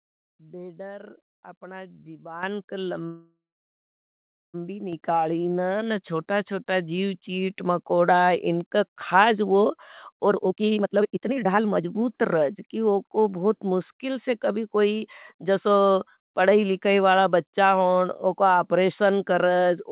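At 2.43 s the microphone volume steps up by about 10 dB. The call software judged the input too quiet and raised the device gain in one jump. Speech and background get louder together, instantly.

From 3.06 to 4.56 s there is a call audio freeze. The last sound trails off briefly, then about 1.2 s of silence follows. Packets were likely held up in transit, emptying the jitter buffer. The audio resumes where it stopped, so nothing is lost, only delayed.

Two more microphone volume steps follow, at 4.93 s by about 5 dB and at 5.96 s by about 1 dB. Each is a sudden rise in overall level, the second barely noticeable.

From 10.28 to 13.28 s a jitter buffer speed-up plays the speech at about 149% speed, ending just before "बहुत मुष्किल से कभी". The buffer had built up excess delay after the freeze. The receiver trimmed many short pitch-period pieces, roughly one and a half seconds in total. Pitch stays the same, but the speech sounds rushed.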